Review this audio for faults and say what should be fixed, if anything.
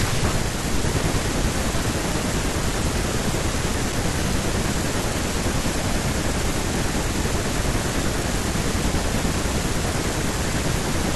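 Nothing here needs fixing; I listened closely and didn't hear a single fault to flag.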